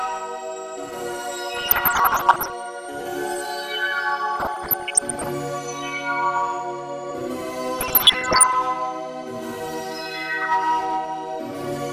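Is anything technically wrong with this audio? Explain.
Yes. Two faults can be heard.

Throughout the clip there is MP2 compression damage. The encoder likely had too few bits to spread across its 32 sub-bands, which fits a rate of around 80 kbps, so whole upper bands were switched off while the rest were coarsely quantised. The damage is plainly audible: the sound is dull and muffled at the top, with a granular, gurgling roughness as bands flicker in and out.

DAB burbling appears in three bursts, from 1.54 to 2.53 s, 4.36 to 5.29 s and 7.79 to 8.55 s. During these stretches reception was poor enough that bit errors, around one percent, slipped past the error correction into the MP2 data. Corrupted samples put short blips of noise into single sub-bands, and corrupted scale factors make sub-bands jump in level for up to a frame, laid over the audio.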